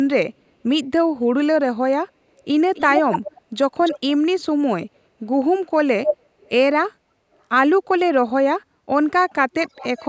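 A delayed copy of the speech trails the talker by about 287 ms in six bursts: 2.39 to 2.44 s and 6.4 to 6.49 s as barely audible scraps, 2.74 to 3.36 s nearly as loud as the speech, 3.83 to 4.0 s a little weaker, 6.05 to 6.17 s at full strength, and 9.53 to 10.08 s faintly. This is echo leak, likely from a far-end loudspeaker whose echo canceller let part of its microphone pickup return down the line.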